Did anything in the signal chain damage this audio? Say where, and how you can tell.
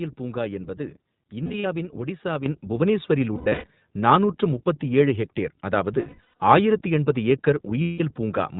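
Yes. At the codec stage, the whole clip has passed through iLBC, a narrowband VoIP codec. Nothing above 4 kHz survives, so the speech sounds boxed-in and dull at the top. Each frame's excitation is coded on its own, and at this clip's rate that leaves a plainly audible rough, slightly synthetic texture on the speech throughout. The character fits the 15.2 kbps mode with 20 ms frames.

At the network stage, there are lost iLBC frames in four places: 1.44–1.66 s, 3.36–3.68 s, 6.00–6.41 s and 7.82–8.01 s. Where packets went missing, the decoder filled the holes by repeating the last pitch cycle blended with noise. Those stretches come out as held, buzzy, breathy vowel sounds. The first three bursts are scattered rather than solid, with the longest runs of about 70 ms in the first and about a tenth of a second in the next two. Because iLBC frames stand alone, the speech snaps back almost immediately after each gap.

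In call processing, there is a microphone volume step-up at 2.46 s. The call software judged the input too quiet and raised the device's capture volume in a single jump of about 7 dB. The speech and the background noise both get louder at the same instant, and neither ramps. That shared jump marks it as a change in the input gain before encoding, not a change in how the talker was speaking.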